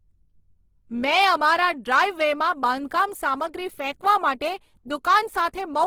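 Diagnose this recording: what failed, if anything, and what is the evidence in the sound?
Throughout, the speech sounds grainy and rough but extends to about 20.4 kHz. This is a codec-stage fault, likely Opus compression in CELT mode, consistent with roughly 16 kbps.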